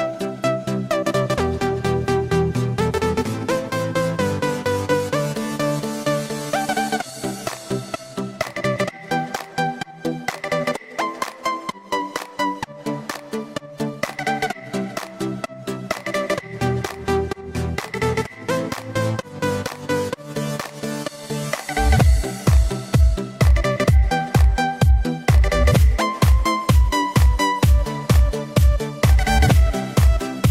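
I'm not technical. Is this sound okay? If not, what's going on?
Yes, nothing in this recording points to a technical problem; the signal holds steady and intact the whole way.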